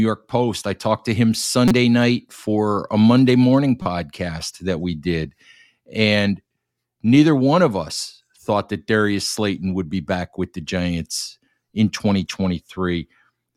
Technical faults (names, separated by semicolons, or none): corrupt frame decoded